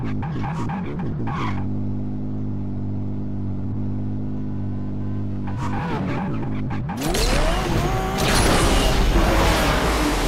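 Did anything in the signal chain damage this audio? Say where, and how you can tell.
No, nothing in the signal chain audibly damaged this audio.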